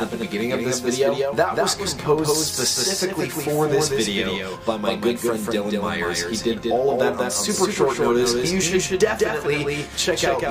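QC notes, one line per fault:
Throughout, doubled audio track: a second full-band copy of the sound runs about 200 ms behind the original at a level roughly 5 dB lower, so every onset is followed by a distinct, slightly softer repeat. The copy carries no decay tail or added room colour; it is a clean duplicate held at a fixed offset, which points to the audio likely being captured twice by a slower second path and mixed back in.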